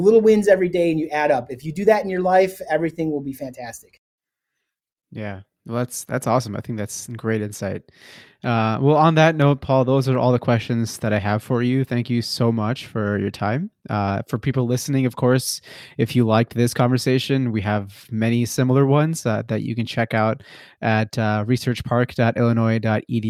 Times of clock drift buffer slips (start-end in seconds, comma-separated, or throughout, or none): none